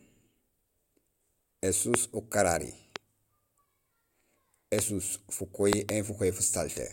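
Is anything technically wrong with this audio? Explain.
Yes. There are loud pops at 1.94–1.96 s, 2.96–2.98 s and 4.79–4.81 s, and a double pop at 5.73–5.91 s. Each is a sharp thump far above the speech, which carries on underneath. The likely cause is a sudden electrical pulse, such as a switch, static or a driver glitch, entering the signal path.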